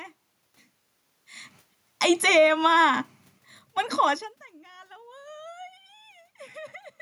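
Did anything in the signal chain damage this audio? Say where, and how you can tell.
Yes. Automatic gain falling in the call-processing stage pulls the level down twice: about 8 dB from 1.91 to 2.56 s, then about 6 dB from 3.11 to 4.41 s. The room noise sinks with the speech, so the gain control is responsible, not the talker.

Between those drops, automatic gain rising lifts everything by about 4 dB from 2.52 to 3.18 s. Speech and background swell together, so the controller is hunting. The talker's own movements, around 1.5 s and 4 s, change only the voice.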